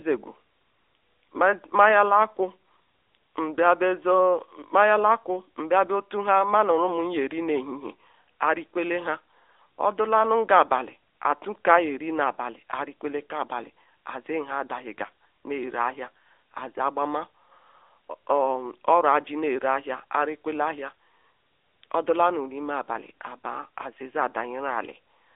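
AMR narrowband mobile codec damage runs through the whole clip. The speech has passed through a mobile speech coder that rebuilds the voice from a vocal-tract model excited by sparse pulses, and it keeps only a band of roughly 300 Hz to 3.6 kHz, with nothing above 3.7 kHz. The coding is plainly audible as a buzzy, synthetic edge on the voice, which fits a mid-range rate near 10.2 kbps.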